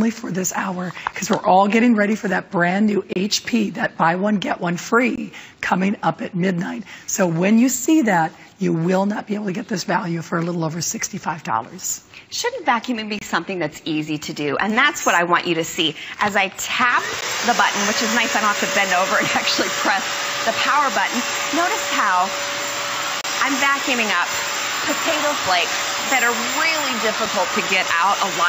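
At 1.13 s, 3.13–3.16 s, 5.16–5.18 s, 13.19–13.22 s, 17.21 s and 23.21–23.24 s, a gap between stream segments on the 2-second segment grid inserts 6 to 31 ms of hard-edged silence without losing audio. Each shows as a flat waveform stretch and a blank vertical spectrogram stripe.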